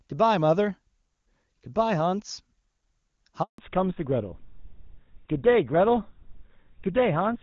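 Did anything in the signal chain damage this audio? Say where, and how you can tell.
Yes, the network stage damaged it. At 3.42 s there is a handover gap. The speech cuts out within a few tens of milliseconds and stays silent for 160 ms, until 3.58 s. That fits the call being handed from one network link to another with no speech frames delivered during the switch. The receiving end had nothing to decode, so the audio in that window is simply missing, not masked or smoothed over.

From 3.58 s to the end of the clip there is a fallback to narrowband. Before the gap the speech carries energy up to the wideband limit, and the HD Voice coding there sounds clean, which points to a high AMR-WB rate. After it, nothing remains above 4 kHz and the voice turns dull and somewhat rough. That points to the call renegotiating onto an older narrowband codec, consistent with GSM full rate, when the new link came up.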